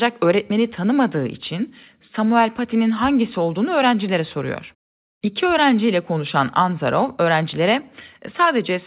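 No technical faults can be heard in the speech, which arrives over a call path whose narrowband coding, consistent with G.711 mu-law at 64 kbps, leaves nothing above 4 kHz.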